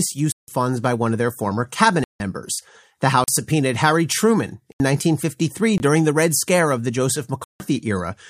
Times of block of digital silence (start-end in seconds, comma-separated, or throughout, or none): 0.32-0.48, 2.04-2.20, 3.24-3.28, 4.72-4.80, 5.78-5.80, 7.44-7.60